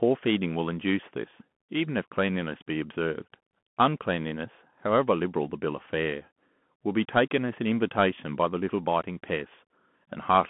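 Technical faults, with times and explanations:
Throughout, Bluetooth CVSD headset codec: thin, boxed-in speech with nothing above 3.8 kHz, granular hiss underneath and scratchy sibilants. This fits a 64 kbps one-bit delta coder whose adapting step can't follow fast, loud high-frequency movement.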